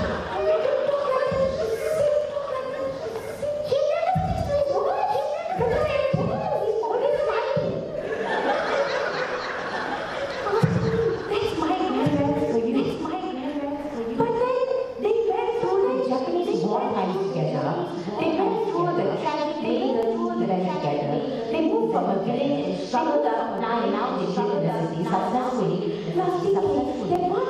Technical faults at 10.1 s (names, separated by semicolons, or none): doubled audio track; clock drift buffer slips